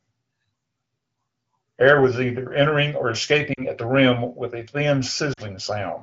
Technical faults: lost AMR speech frames

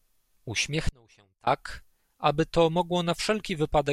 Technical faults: audio dropout to a faint residue

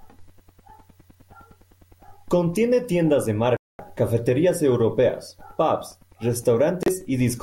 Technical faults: digital broadcast dropout

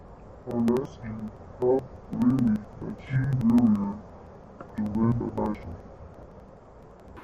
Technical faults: interleaved audio read as planar

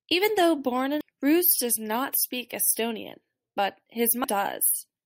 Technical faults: damaged data in a compressed stream

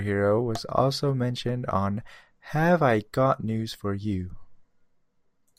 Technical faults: corrupt frame decoded

